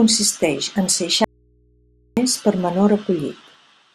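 A speech clip with an audio dropout to a faint residue. From 1.24 to 2.17 s, about 0.93 s, the speech cuts out abruptly. Only low mains hum remains, roughly 40 dB below the speech. The likely cause is a brief signal loss with the input left live.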